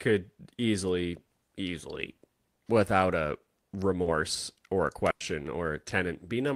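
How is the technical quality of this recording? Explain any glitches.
The recording has three network-related dropouts, all from packet loss on the call path.

At 2.55 to 2.60 s, between "easily easily" and "without a", and again at 4.02 to 4.08 s, there is short concealed packet loss. The decoder lacked audio in time and extrapolated from the preceding sound: about 30 ms of fill covering 20 ms of missing audio in the first case, and 40 ms covering 40 ms in the second. Each is heard as a brief smear or wobble as the synthetic fill blends back into real speech.

At 5.10 to 5.22 s, just after "or a", there is a burst of packet loss. Several consecutive packets, about 100 ms in total, arrived too late or not at all. The receiver stretched the last sound across the gap with roughly 100 ms of concealment and no outright silence, so a held, fading buzz or hiss replaces that stretch. Playback then resumes further along, and the audio that fell in the gap is gone.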